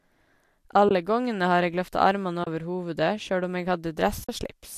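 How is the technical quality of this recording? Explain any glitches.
The speech has three brief, soft-edged dropouts and light codec colouring, likely from low-delay AAC compression.

AAC frame loss with muting: the sound fades into a short silence and back out at 0.89–0.91 s, just before "gongene har eg løfta"; at 2.44–2.47 s, between "har eg løfta armane" and "over hovudet sjølv om"; and at 4.24–4.29 s, after "hovudet sjølv om eg". The gaps last about 20, 30 and 50 ms, which fits runs of two, three and five 10 ms frames going missing. The decoder replaced each missing frame with silence, and the overlapping windows of the neighbouring frames blend the edges into gentle fades.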